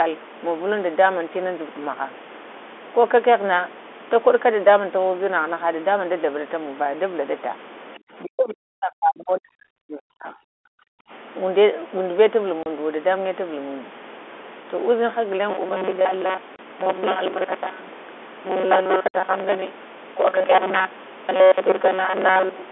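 Speech carried over a telephone-band G.711 line suffers three faults. From 7.99 to 11.11 s, speech is suppressed in double talk, most likely because the echo canceller mistook the talker for loudspeaker echo while both sides spoke. The voice is turned down for about three seconds in all, dipping by as much as about 40 dB. Packet loss filled with silence cuts hard-edged gaps of 30 ms at 12.63 s, 30 ms at 16.56 s and 60 ms at 19.08 s. Each hole is a multiple of the 30 ms packet length, and the receiver played nothing in its place. From 15.50 s to the end, new audio likely arrives too seldom and a short buffer is replayed to fill the time, causing robotic sound from repeated short buffers. Most of the sound is repeats, which lay a rigid, metallic 188 Hz buzz over the speech, consistent with a buffer of roughly 5.3 ms.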